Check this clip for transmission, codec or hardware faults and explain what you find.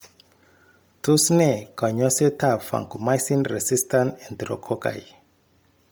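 One codec fault runs through the whole clip. It likely comes from Bluetooth LC3 compression in 10 ms frames, at a low rate that fits 32 kbps. Much of the upper spectrum is dropped and refilled with noise. The speech sounds heavily breathy and grainy, with nothing above 20.2 kHz.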